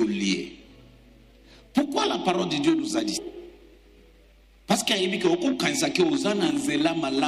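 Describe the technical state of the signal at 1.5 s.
At 1.5 s the signal is intact, with no audible technical fault.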